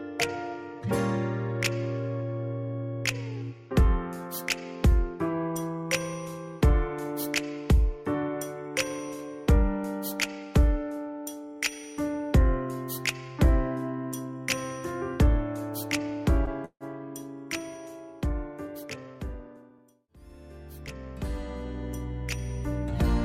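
At 16.45 to 16.50 s there is a short stall from a late packet. The audio holds its last sound for about 15 ms. A packet was missed at its due moment, so the jitter buffer emptied. The receiver stretched what it already had until the packet arrived. It then carried on from the same point. Nothing is lost. The overall delay grows by 15 ms, and the held sound carries a slight buzz or dip.

From 16.65 to 16.84 s comes a call audio freeze. The last sound is drawn out as a fading buzz or hiss, then about 80 ms of silence. In total, 157 ms of filler is inserted. The likely cause is packets held up in transit, leaving the jitter buffer empty. When they arrive, the audio resumes exactly where it stopped. Nothing is skipped, but the delay rises by another 157 ms.

From 18.67 to 19.79 s there is a jitter buffer speed-up. The buffer now holds more audio than it aims for. To shrink it, the receiver cuts many tiny slices, each one or a few pitch periods long. 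Together they come to roughly 150 ms. The sound plays at about 111% speed with its pitch unchanged. It comes across as hurried.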